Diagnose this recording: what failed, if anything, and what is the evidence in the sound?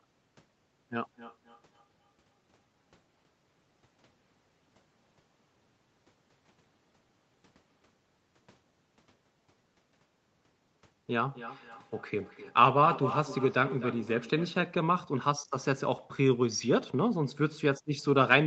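Speech returns at fixed intervals of about 0.3 s, at 1.0–7.86 s (about −41 dB) and 10.71–14.74 s (about −12 dB). This is feedback echo between two devices: one replays the other's microphone into the room, beyond that device's echo canceller.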